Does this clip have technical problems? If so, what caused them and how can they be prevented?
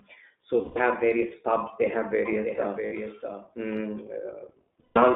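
Yes. The whole clip runs through the iLBC codec. The speech is confined to roughly 250 Hz to 3.6 kHz, with nothing above 4 kHz, and has a plainly audible rough, slightly synthetic grain that fits iLBC's 20 ms frames in its 15.2 kbps mode. Unlike a general low-bitrate codec, the damage comes from narrowband excitation coding: there is no warbling, swirly smearing. A wideband codec such as Opus avoids it.

There are lost iLBC frames at 0.62–0.78 s (140 ms), 2.86–2.93 s (60 ms) and 4.80–4.98 s (160 ms). Each gap is filled with a held, buzzy, breathy vowel-like tone as the decoder repeats the last pitch cycle mixed with noise. This concealment is what sets them apart from plain dropouts, which would be silent. The voice recovers almost at once because each iLBC frame is coded independently. A larger jitter buffer, forward error correction, or a less congested network would prevent them.

A doubled audio track runs from 2.26 to 3.66 s. 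A full-band copy of the audio sits about 0.7 s behind the original and about 5 dB quieter. It starts and stops abruptly and has no decay or room colour, which separates it from reverb or an acoustic echo. Its likely cause is the same signal being captured twice, once by a slower path. Making sure the audio is routed into the mix only once prevents it.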